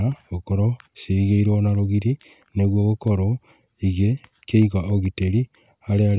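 No technical faults can be heard in the speech. There is nothing here to place on the timeline.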